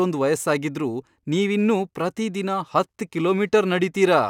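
Sample clock jitter runs through the whole speech clip: the converter's timing wanders by roughly a microsecond or two, so each sample lands slightly off its instant. The resulting error, around 40 dB below the signal, rides on loud, bright passages as a faint hiss and drops away in pauses.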